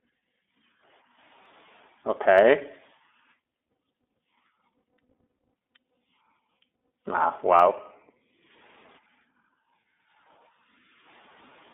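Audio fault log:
throughout, iLBC codec: narrowband speech with nothing above 3.6 kHz, rough and slightly synthetic, consistent with 13.33 kbps iLBC coding each 30 ms frame independently.
1.46 s, 2.38 s, 7.60 s, dropped samples: three isolated sharp clicks, likely from a few samples missing, so the waveform jumps abruptly between values.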